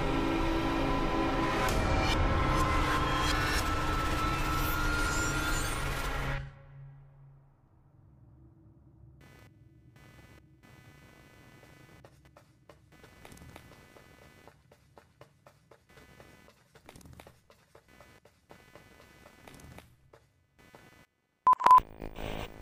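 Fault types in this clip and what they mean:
Computer activity noise: Changing load in the computer's processor, graphics or mouse disturbs the ground shared with the audio circuit. That shows up here as a buzzing, scratchy pulse. It starts at 9.21 s and runs to the end of the clip. The pulses repeat at roughly 300 per second. The noise sits well under the sound, roughly 30 dB down. It follows the machine's activity, not the audio content.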